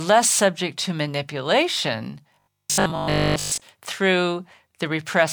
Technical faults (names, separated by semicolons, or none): robotic sound from repeated short buffers